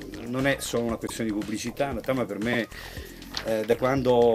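You'll catch two quick stutters in this audio, both from repeated frames, where a chunk of the compressed stream got written twice, so the decoder simply plays the same slice again. The first is around 1.06 to 1.10 s, a 26.1 ms block heard twice, which fits a single compressed frame. The second, around 2.52 to 2.58 s, repeats a 52.2 ms block, more like two frames. Each shows up as a small hiccup, and together they stretch the audio by about 78 ms.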